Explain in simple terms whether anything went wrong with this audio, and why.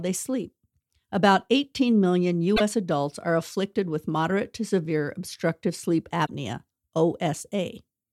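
Two brief glitches break into the speech, at 2.53 to 2.61 seconds and 6.23 to 6.29 seconds. Both are damaged data in a compressed stream: bits of the file were corrupted, so the player misread those pieces and briefly lost its place.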